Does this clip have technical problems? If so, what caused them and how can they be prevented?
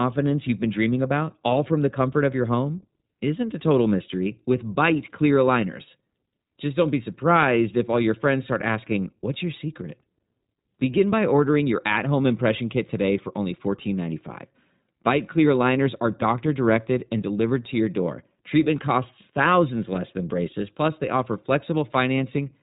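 Yes. The whole 23-second speech clip carries plainly audible iLBC codec damage: nothing above about 3.8 kHz survives, and the voice sounds slightly rough and synthetic, since each 20 ms frame's excitation is coded independently at what sounds like 15.2 kbps. Avoid it by recording or sending through a wideband codec instead.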